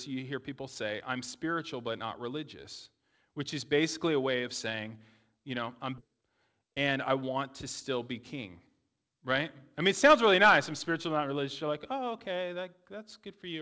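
At 5.98 s the speech skips ahead: about one and a half seconds of audio was dropped while later audio was waiting, and the two sides join with no gap. From 6.08 to 7.37 s a jitter buffer speed-up follows, with short pitch-period pieces cut repeatedly to remove around 150 ms. The speech runs at 110 percent speed, sounding hurried at unchanged pitch. Through the G.722 call path, nothing above 8 kHz can be heard.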